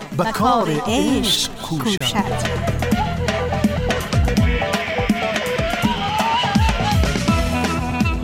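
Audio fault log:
1.98–2.01 s, gap between stream segments: a 30 ms hard-edged hole of silence, where two segments' timestamps fail to meet and the player fills the space; no audio is lost. The waveform shows an abruptly flat stretch; the spectrogram shows a sharp, empty vertical stripe.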